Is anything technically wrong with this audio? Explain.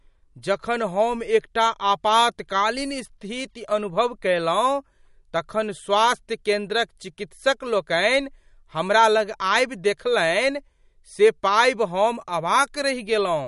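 Yes. Throughout the speech, nothing is present above 11.2 kHz, and plainly audible watery, swirly artefacts appear, likely from MP3 compression at a rate fitting 48 kbps, where starved frequency lines drop in and out.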